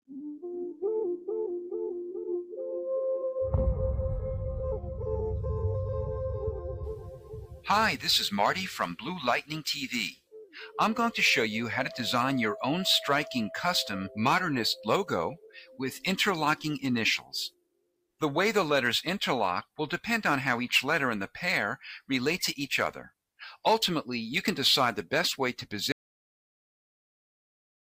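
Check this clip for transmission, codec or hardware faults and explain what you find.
Three faults are present: a speech-tuned noise suppressor running on non-speech material, six specific moments where that suppressor cuts the sound hard, and a dropout to silence at the end.

A noise suppressor applied to music or sounds stays active for the whole clip. Its gain decisions treat sustained tones, ambience and decay tails as noise, so the level swings by around 10 dB as it reacts. Onsets pass largely intact, but anything held or fading gets pulled down. The result is an audible pumping and thinning, with the background and tails repeatedly ducked and released.

Sound cut by the noise suppressor occurs at 0.07–0.83 s, 2.01–2.59 s, 6.95–7.67 s, 10.11–10.56 s, 15.36–15.79 s and 17.49–18.21 s. In each window the suppressor classifies the material as noise and attenuates it more than elsewhere. 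The deepest drops are about 21 dB at the first, fourth and sixth, about 16 dB at 6.95 s, and about 12–13 dB at the others. These are brief sinks lasting roughly 0.4 to 0.7 seconds, where sustained parts sink in level and sharp attacks survive.

An audio dropout to silence starts at 25.92 s and runs to the end of the clip. The signal falls to silence, with no room tone or noise floor remaining, which points to a true gap rather than a quiet passage. This is likely from the input being lost, through a disconnected device, a failed link or a mute, while recording continued. Whatever followed 25.92 s is missing.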